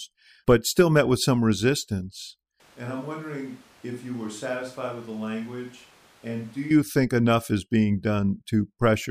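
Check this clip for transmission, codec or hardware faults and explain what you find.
One fault stands out, a switch to a distant microphone. From 2.60 s, right after "met with some resistance", the speech abruptly turns roomy and hollow, thinner in the bass and roughly 10 dB quieter, with room noise rising to around 25 dB below the speech. At 6.71 s, just before "think enough is being", the close sound snaps back. The likely cause is that the close microphone dropped out and the recording fell back on a pickup much farther away, capturing more of the room's reflections and noise.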